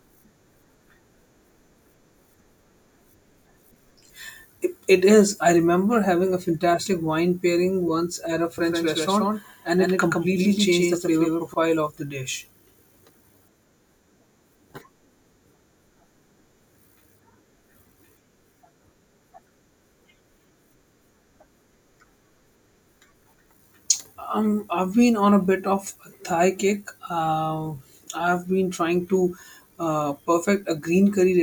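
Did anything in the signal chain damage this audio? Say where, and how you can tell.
Yes. From 8.58 to 11.54 s, after "pairing once at a" and before "of the dish", a doubled audio track appears: a full-band copy trails by around 150 ms, a few dB quieter, with no decay, and switches abruptly. This likely comes from a second, slower capture path in the driver or routing.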